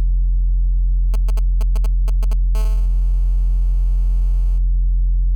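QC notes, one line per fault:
1.14–2.56 s, GSM signalling bursts: a nearby 2G phone sends short groups of radio bursts before settling into a call. The audio circuit rectifies them, so a galloping dit-dit-dit of brief 216.7 Hz buzzes sits roughly 20 dB below the sound.
2.56–4.58 s, GSM phone buzz: the same phone is now in a call, transmitting steadily at 216.7 Hz. Rectified pulses give a hard, raspy buzz rich in harmonics, about 30 dB below the sound. It has no relation to the audio itself.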